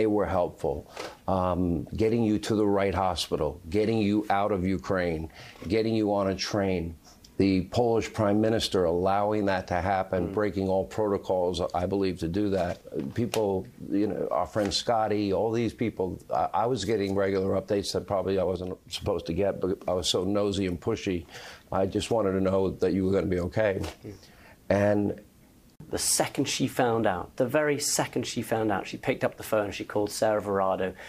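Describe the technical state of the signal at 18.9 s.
At 18.9 s the sound and its background drop together by about 5 dB, a sudden gain jump spanning 18.56 to 18.93 s, likely from digital gain switched without a ramp.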